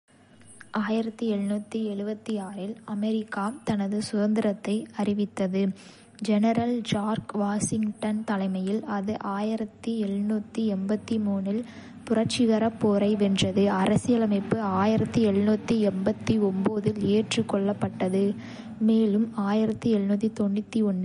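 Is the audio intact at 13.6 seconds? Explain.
No. At 13.6 seconds the speech carries the same damage heard through the whole clip, most likely MP3 compression. Nothing sounds above 10.6 kHz, and the sibilants have a watery, swirling quality as weak frequency lines drop in and out between frames. A plain low-pass filter would dull the top without that flicker, and the plainly audible artefacts point to a low bitrate of roughly 40 kbps.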